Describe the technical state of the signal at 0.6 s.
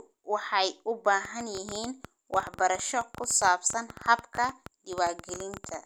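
At 0.6 s the speech signal is intact, with no audible fault at that moment.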